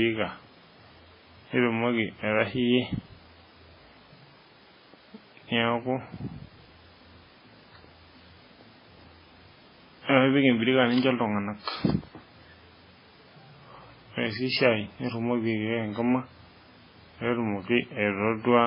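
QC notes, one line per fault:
Throughout, transcoding between lossy codecs: nothing above 5.3 kHz, with smeared, swirling low-rate artefacts under a second layer of coding grit. The dull ceiling points to a very low-bitrate MP3 pass, likely re-encoded to WMA at a higher rate that cannot restore it.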